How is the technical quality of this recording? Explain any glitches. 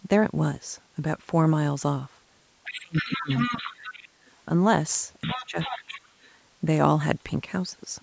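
The speech has two recurring call-processing faults, both in the same two stretches.

Other side's voice leaking through, from 2.64 to 4.08 s and from 5.22 to 6.0 s: a second voice sits about 10 dB under the talker. This is likely a loudspeaker echo that the echo canceller did not fully remove.

Speech suppressed in double talk, at 2.65–3.31 s, 3.5–4.04 s, 5.26–5.57 s and 5.74–6.12 s: the talker's level dips by up to about 25 dB, or about 10 dB at 5.26 s. The likely cause is the canceller ducking everything while both sides talked.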